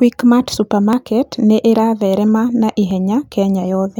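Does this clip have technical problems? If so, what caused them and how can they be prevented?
Yes. Overlap between stream segments at 0.93 s and 2.91 s: overlapping timestamps on 2.0 s segments made the player trim real audio, leaving tiny skips. Aligning segment timestamps exactly at the boundaries prevents this.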